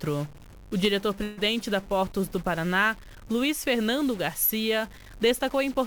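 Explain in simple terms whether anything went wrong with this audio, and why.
Two things went wrong here. All the way through, the sound has a noisy, distorted edge, and even the pauses are filled with a gritty noise. That's most likely a stuck bit: one digit in every sample is frozen, so about half the values come out wrong.

The second is a burst of packet loss from 1.23 to 1.39 s. A run of audio never arrived in time, so the player stretched out the last bit of sound and let it fade. When the audio returns, roughly 140 ms is simply missing.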